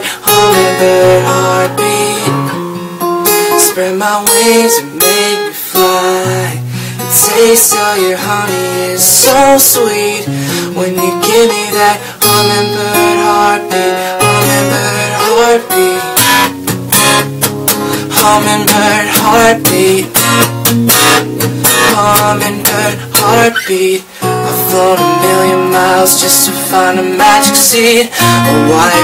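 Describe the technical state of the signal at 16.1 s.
At 16.1 s you're hearing hard clipping, and it runs through the whole clip. The signal is driven about 14 dB past what the stage can pass, so a few percent of samples get sliced flat, and those square tops add a harsh, crackly fuzz on every loud moment.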